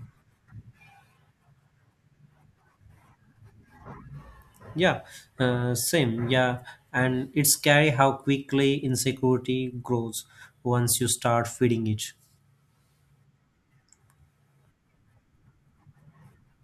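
Listening to the speech recording, nothing stood out as a technical problem at any point.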